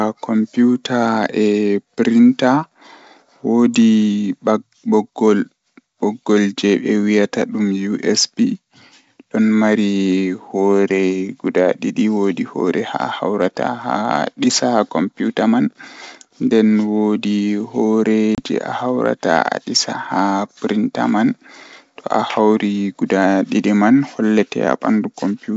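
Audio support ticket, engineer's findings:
Packet loss on ADPCM call, 18.35–18.41 s: hard 30 ms silent gap, then a slightly distorted return as predictor resyncs. Unlike concealment, nothing fills the hole.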